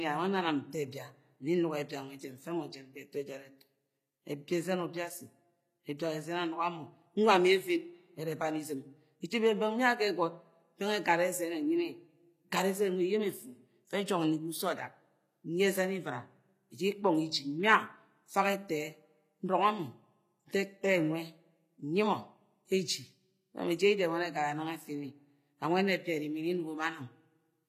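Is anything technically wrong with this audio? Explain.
Yes, there's clear damage throughout the speech: nothing above 14.9 kHz, with gritty, lispy s sounds, likely HE-AAC compression at a low bitrate (around 24 kbps), rebuilding the treble from lower bands.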